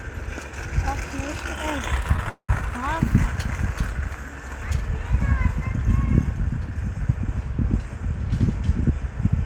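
From 2.07 to 2.51 s, packets kept arriving late, so the jitter buffer ran dry four times. This caused repeated stalls (stutter): the receiver stretched the last sound through each gap, 232 ms in all and over half that span, the longest 198 ms. Nothing is lost, but the audio drags and hiccups.

Between 8.32 and 9.29 s the buffer had built up more audio than it targets, so the receiver trimmed short pitch-period slices again and again. This jitter buffer speed-up removes around 40 ms, and the sound runs at 103% of its pace without any change in pitch.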